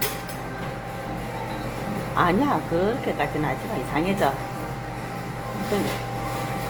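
Everyday sound runs throughout with plainly audible Opus compression damage as the likely cause. Tonal parts turn rough, grainy and noisy rather than swirly, which fits a low bitrate around 24 kbps in the codec's music mode, where starved bands are refilled with folded or noise-like content. On a spectrogram the bands stay filled, with few holes but a speckled, noise-textured look, and content reaches about 20.2 kHz, showing fullband coding without narrowing.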